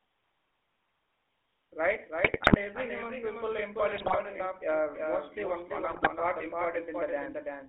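From start to finish the speech carries a doubled audio track: a second, full-band copy about a third of a second behind and a few decibels quieter, likely from an edit holding two copies out of step. It shows as a repeated waveform envelope with no decay tail. The GSM full-rate codec also runs throughout, giving a buzzy, gravelly roughness. On a spectrogram the energy sits within about 300 Hz to 3.4 kHz, consistent with the 13 kbps GSM full-rate codec. GSM bit errors strike at 2.24–2.58 s, 3.96–4.17 s and 5.9–6.09 s. Corrupted filter, pitch and gain values produce squawks, pops and gargling, seen as smeared spectral bands and sudden level spikes.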